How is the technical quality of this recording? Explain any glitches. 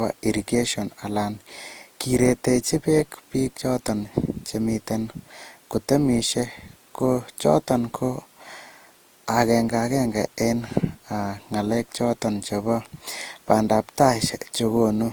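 The recording is degraded by generation loss throughout. It sounds swirly, smeared and hollow, with blurred consonant attacks. This is likely from repeated Opus re-encoding, about four passes at a rate consistent with 48 kbit/s. On a spectrogram, energy stops at 20.2 kHz, with smeared transients.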